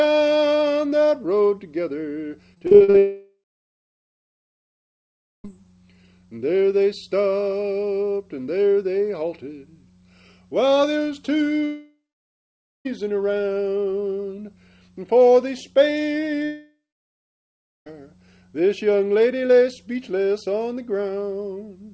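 From 2.54 to 2.96 s the audio turns choppy and robotic: repeated packet loss, seven short gaps of up to 42 ms each, about 0.24 s missing in all. Each hole is patched by extending the previous sound, so more than half of this stretch is synthetic fill. Heard through the call path, which has nothing above 8 kHz, this fits G.722 at 64 kbps.

Immediately after, from 2.98 to 5.47 s, comes a long network dropout: roughly 2.5 s of audio is lost. The last sound is stretched into a brief fading buzz or hiss, then about 2.1 s of silence follows before audio resumes without the missing part. The same happens from 11.65 to 12.87 s, with about 0.87 s of silence, and from 16.45 to 17.88 s, with about 1.1 s of silence. The likely cause of all three is a stretch of packets never reaching the receiver.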